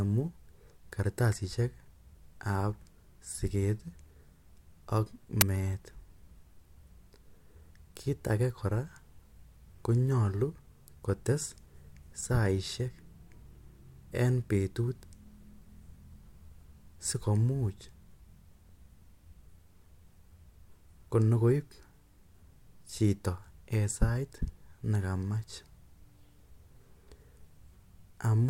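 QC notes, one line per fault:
5.41 s uninitialised buffer: a 10 ms block of stale memory played as audio gives a loud crack, not a dropout's brief silence.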